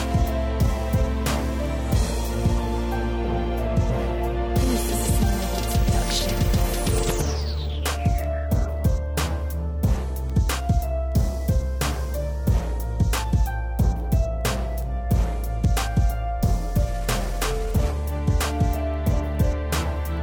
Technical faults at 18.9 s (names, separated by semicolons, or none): word clock ticks